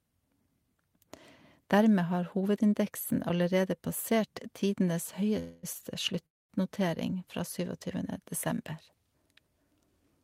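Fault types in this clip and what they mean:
call audio freeze: At 5.39 to 5.65 s the sound stops moving forward and the last moment is held as a fading buzz for about a quarter second. At 6.26 to 6.52 s a similar gap of roughly 0.23 s drops almost straight to silence. Afterward the speech resumes where it broke off, with nothing lost, only delayed. The likely cause is packets held up in transit, so the jitter buffer ran empty and the receiver had to fill the wait.
short stall from a late packet: Between 5.73 and 5.77 s a sound is drawn out by about 20 ms, with a faint buzzy smear before the speech carries on from the same point. Nothing is skipped, and the timing simply slips by that small amount. One packet missed its playout moment and the jitter buffer briefly ran dry. The receiver stretched the last sound until the packet arrived and then played it in order.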